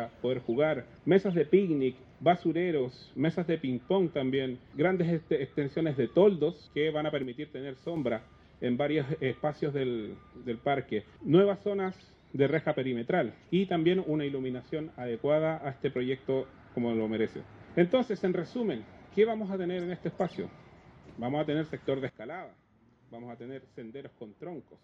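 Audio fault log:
7.23–7.96 s and 22.09 s to the end: sudden gain jump. Everything, background noise included, drops abruptly by about 6 dB, then about 13 dB later, with no fade. This is likely a digital gain change applied instantly, without a ramp.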